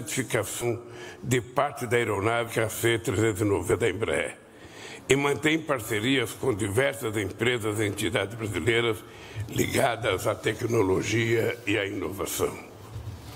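Compressed frames skipped: runs of 20 ms frames were lost or rejected at 0.61–0.64, 2.47–2.50 and 3.71–3.76 s, so the sound jumps ahead roughly 0.1, 0.15 and 0.15 s.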